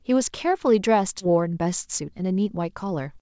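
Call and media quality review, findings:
Skip ahead at 1.20 to 1.22 s: speech jumps forward with no gap, about 0.7 s of audio missing, so the two sides are butted together. Jitter buffer dropped queued audio, cutting delay by about 0.7 s.

Jitter buffer speed-up from 1.30 to 3.17 s: speech sounds hurried at unchanged pitch, running at 114% speed. The buffer removed short pitch-period chunks repeatedly, around 0.3 s in total, to shrink its excess delay.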